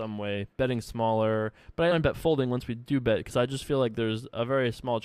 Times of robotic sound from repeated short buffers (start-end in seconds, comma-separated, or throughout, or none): none